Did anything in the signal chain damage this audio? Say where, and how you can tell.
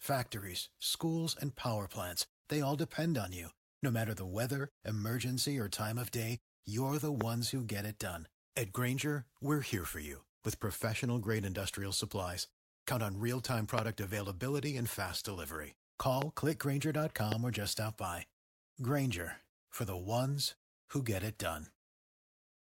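Yes, there are four loud pops, at 7.21, 13.78, 16.22 and 17.32 s. Each is a single sharp click lasting about 20 ms and jumping well above the speech, with the one at 13.78 s the hardest hitting. The speech keeps going underneath every time. That points to something injecting a brief voltage spike into the chain, most likely in the analogue wiring, like a loose plug or a static discharge, or a glitch in the driver.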